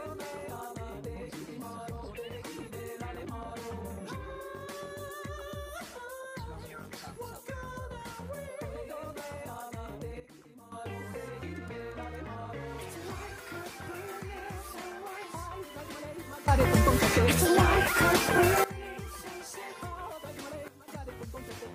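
Three sudden gain jumps, with sound and background stepping together: down about 12 dB at 10.2–10.72 s, up about 18 dB at 16.48–18.64 s, then down about 12 dB at 20.68–20.88 s. Each is likely an unramped digital gain change.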